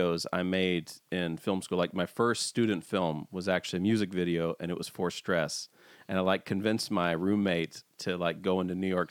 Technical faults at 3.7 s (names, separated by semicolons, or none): dropped samples